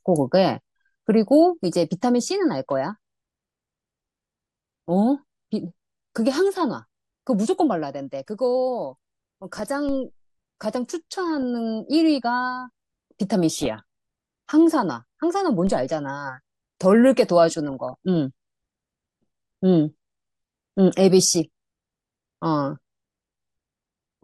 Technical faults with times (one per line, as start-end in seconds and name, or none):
0.00-24.23 MP2 compression
9.56-9.61 DAB burbling
9.89 DC step
13.55-13.67 DAB burbling
15.67 DC step